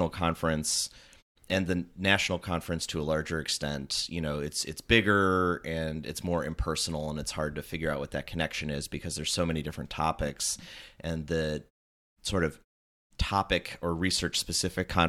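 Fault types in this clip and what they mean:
No faults are present.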